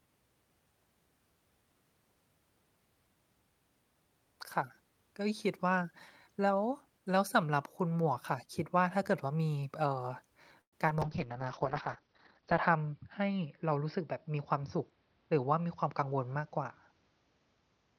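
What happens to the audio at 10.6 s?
A call audio freeze occurs from 10.61 to 10.75 s. The last sound smears into a brief fading buzz, then 80 ms of silence, likely from delayed packets draining the jitter buffer. The audio then resumes where it stopped, losing nothing but running 111 ms late.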